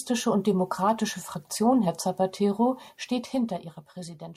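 From 3.02 to 3.92 s the gain is lowered in unsmoothed 2 dB jumps rather than a continuous ramp, dropping the level by around 10 dB over those 0.9 s. Each jump puts a small discontinuity in the waveform, so the speech carries a fine ticking, roughly seven clicks a second, that rides on the fade until it stops. This is zipper noise.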